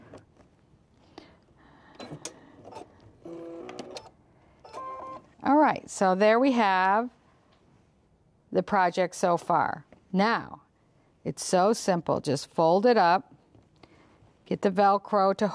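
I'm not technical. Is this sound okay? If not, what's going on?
Yes, the sound is okay. Nothing in it points to a technical problem.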